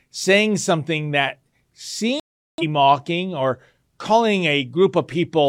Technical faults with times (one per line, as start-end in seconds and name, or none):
2.20-2.64 digital broadcast dropout